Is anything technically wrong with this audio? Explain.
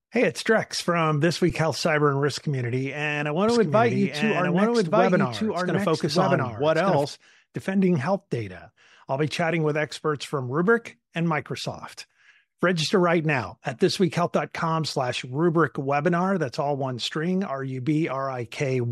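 Yes, there are two faults. At 1.50 s, an underrun with held sample makes the waveform freeze for 8 ms. Playback resumes where it stopped, so the dropout is soft.

From 3.48 to 7.04 s, after "and I" and ending before "defending health data I'll", a doubled audio track appears. A copy about one second late, about equally loud, starts and stops abruptly. It likely comes from a second, slower capture path.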